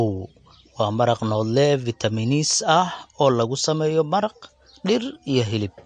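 Throughout, the speech has a hard treble ceiling near 9.4 kHz and watery, swirling sibilants, likely MP3 compression at a low bitrate; that swirl sets it apart from simple low-pass filtering.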